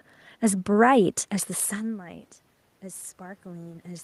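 From 1.68 s to the end, automatic gain rising is heard. The input fell by about 19 dB as the talker moved back. The gain climbs slowly, lifting voice and room noise together.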